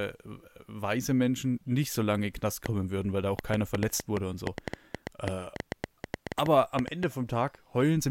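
Speech carries a train of clicks from 2.66 s to 7.04 s: around thirty sharp, similarly shaped pulses at nearly 6 per second, spaced unevenly and peaking roughly 15 dB above the speech, so they tick through the pauses as well. The likely cause is interference from nearby equipment or a faulty connection or power supply. Unlike random crackle, these clicks share one shape and persist as a sustained series rather than scattered single pops.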